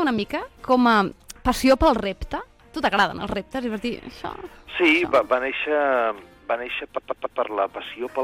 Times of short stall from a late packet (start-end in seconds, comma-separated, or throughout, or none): none